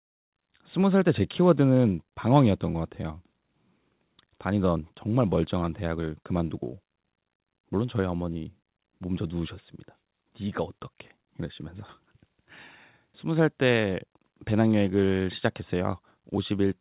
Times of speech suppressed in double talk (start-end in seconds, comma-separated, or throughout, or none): none